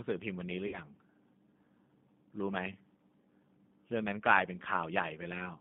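From start to finish the speech passes through the G.729 codec, consistent with its 8 kbit/s Annex A variant. The band runs from about 150 Hz to 3.7 kHz, and the model-based rebuilding of each frame gives the speech a plainly audible rough, synthetic edge.

From 0.67 to 0.79 s, VoIP packet loss concealed by the speech codec replaces about 60 ms of audio, which fits three 20 ms packets. The decoder stretches the last pitch and filter into a fading buzzy tone or coloured noise, and the speech stays weakened briefly afterwards.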